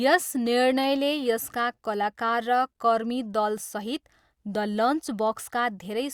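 No technical faults are audible anywhere in the recording.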